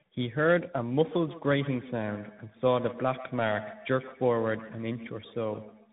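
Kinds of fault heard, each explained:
Tandem speech coding: rough, muffled, warbly speech with nothing above 3.8 kHz, because it was decoded and re-encoded through AMR-NB, G.711 mu-law and CVSD.
Feedback echo between two devices: from 0.99 s each phrase returns roughly every 150 ms, thinner and ringing, at most about 15 dB below the speech, from a second device's playback re-entering the microphone.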